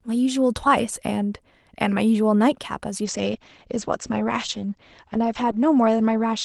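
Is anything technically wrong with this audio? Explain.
Yes. A call bitrate drop begins at 3.04 s and lasts to the end of the clip. The call's bandwidth estimate fell, so the encoder had to code the speech with far fewer bits. From about 32 kbps it sinks to roughly 11 kbps, and it stays at that floor for about 2.5 s. With fewer bits the codec quantises more coarsely and narrows its band from 12 kHz to 8 kHz, so the speech turns duller and rougher, with a watery grain.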